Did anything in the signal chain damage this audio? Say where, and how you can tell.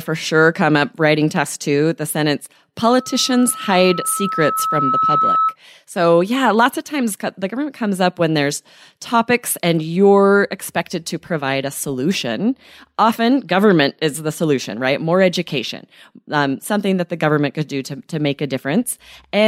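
Yes: a loudspeaker feedback squeal from 2.85 to 5.56 s, just after "test two the sentence", points to the analogue microphone–loudspeaker stage. A single 1.3 kHz tone swells over about two seconds to roughly speech level, because the loop gain at that frequency exceeded one.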